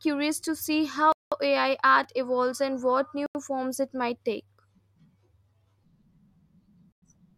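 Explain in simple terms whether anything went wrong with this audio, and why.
Three times the speech drops out to silence and then carries on: at 1.12 s for about 0.19 s right after "to see", at 3.26 s for about 0.09 s between "evolves and what" and "forms it might take", and at 6.92 s for 0.1 s. That's likely a Bluetooth stall, where the headphones ran out of buffered audio while waiting for delayed packets.

At 2.04 s, just before "evolves and what", there's a tiny jumbled moment where chunks came out of order. A piece of audio about 5 ms long played one chunk late, after the piece meant to follow it, leaving hard joins.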